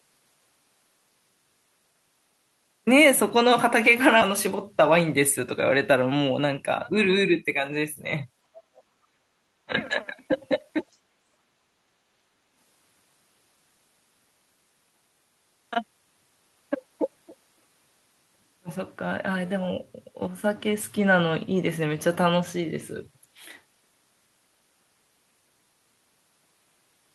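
At 4.21 to 4.23 s the speech makes a skip ahead: roughly 0.4 s of audio is gone with no fill, and the two sides butt together. A queued stretch was dropped, cutting the delay. On a waveform the envelope jumps abruptly, and a spectrogram shows harmonics changing shape at one vertical seam.

From 4.81 to 5.40 s a jitter buffer speed-up runs the speech at about 106% with unchanged pitch, removing around 50 ms in pitch-period slices so it sounds slightly hurried. A spectrogram shows compressed syllable spacing with level harmonic lines, and tiny splices can appear in the waveform.

Between 8.64 and 9.27 s the talker is turned down sharply, the deepest dip around 40 dB. This is likely speech suppressed in double talk, with the echo canceller ducking the talker while the far end is also active. Within that span, at 8.77 to 8.82 s, a faint scrap of the other side's voice leaking through appears, roughly 35 dB below the speech and likely residual loudspeaker echo. 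A shorter dip follows at 9.65 to 9.73 s, near 30 dB deep, again likely the same double-talk suppression. On a spectrogram these show as the talker's harmonics fading or blanking across the band, with the leak a thin, weak smear inside the gap.

At 10.92 to 10.97 s another brief fragment of the other side's voice leaking through surfaces, about 40 dB below the speech and likely echo the canceller missed. It is a faint trace, visible only as a low-energy patch on a spectrogram.

From 11.48 to 12.07 s the background is gated by the echo canceller: room sound drops by about 6 dB while the loudspeaker plays, then returns. The waveform's noise floor steps down and back up, and a spectrogram shows a lighter band across the background.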